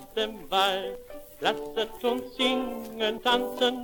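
Abrupt jumps forward at 0.95 s, 1.97 s and 3.18 s, skipping about 70, 20 and 70 ms of sound, likely dropped buffers (overrun) that hardware overwrote before capture.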